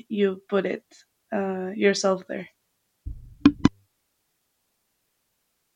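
Nothing in this bit of speech stands out as a technical fault.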